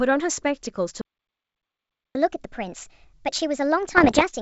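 A speech recording carried over what sounds like G.722 wideband coding, with clean band-limited speech to about 7 kHz that fits the full 64 kbit/s mode, has three faults. At 1.01 s the speech cuts off abruptly and dead silence holds until 2.15 s, a gap of about 1.14 s. This is a playback stall, most likely from the player starving for data or its thread being blocked. A waveform would show a flat line, and a spectrogram a fully blank column. From 2.15 s to the end the speech comes back too fast and too high. This is catch-up at higher speed, with the backlog played at 1.25 times normal rate, which raises the pitch by about four semitones. A spectrogram would show harmonics and formants shifted upward and syllables compressed in time, with the waveform's energy envelope visibly packed tighter. Between 3.97 s and 4.22 s there are pops and short rough bursts with jumpy level. These are bit errors on an ADPCM link, at a modest error rate of roughly one to two percent. 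Each flipped bit throws off the decoder's step size and predictor, so the damage rings on for a few milliseconds. A waveform would show spiky excursions and small amplitude jumps, and a spectrogram would show scattered broadband vertical streaks over the speech.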